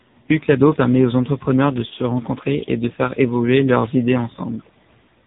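From start to finish the speech carries heavy AMR narrowband mobile codec damage. Bandwidth stops near 3.8 kHz, a hard ceiling on the spectrogram, and the low bit budget, which fits roughly the 6.7 kbps mode, leaves the vocal-tract model driven by sparse pulses, giving a buzzy, synthetic tone.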